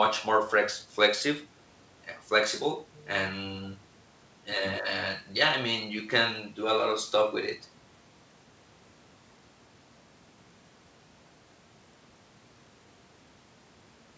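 Nothing stood out on listening to this speech clip, which carries the limited bandwidth of a wideband call, with nothing above 8 kHz.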